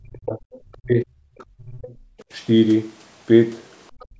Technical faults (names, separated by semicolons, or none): speech suppressed in double talk; other side's voice leaking through; background gated by the echo canceller